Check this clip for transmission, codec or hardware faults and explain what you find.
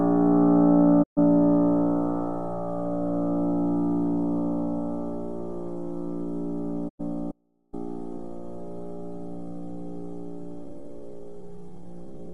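Two kinds of fault are present in this recording of everyday sound.

Digital broadcast dropout occurs twice, from 1.02 to 1.19 s and from 6.88 to 7.01 s. The receiver stopped getting usable frames, or they failed their checksum. It muted until clean frames returned. Each time the sound fades out over about 20 ms and goes silent. The first hole lasts 128 ms, which fits four lost 32 ms frames. The second lasts 96 ms, which fits three. Whatever was sent during each hole is gone.

An audio dropout to a faint residue follows from 7.32 to 7.73 s. The sound drops abruptly for about 410 ms. A faint trace remains, roughly 40 dB below the normal level. It then snaps back in mid-flow. The likely cause is that the wanted signal was lost while the path after the break stayed live. A weak leak of the signal kept passing, with no true silence. The sharp edges set it apart from a pause or fade.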